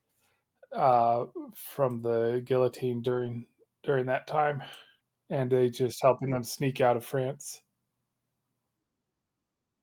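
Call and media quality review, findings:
Lost packet rebuilt from error correction, 0.91–1.13 s, just before "from the guillotine": rough, noisier stretch with no gap. Jitter buffer and Opus decoder. About 120 ms was played from the low-bitrate copies carried in the following packets, which fits six 20 ms packets.

Lost packet rebuilt from error correction, 3.05–3.27 s, between "from the guillotine" and "during that time": same grainy texture, no dropout. 120 ms was rebuilt from in-band FEC copies, again pointing to six packets.

Lost packet rebuilt from error correction, 6.27–6.37 s: shorter coarse patch, about 60 ms, consistent with three packets. The decoder substituted the redundant low-rate copies, so continuity holds but detail drops.

Short concealed packet loss, 4.99–5.03 s, between "during that time" and "and they just helping": brief smear or wobble. Receiver-side packet loss concealment. 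About 20 ms never arrived in time. Roughly 14 ms of it was synthesized by extending the preceding sound, using its pitch if voiced or shaped noise if not, then cross-faded back into the real signal.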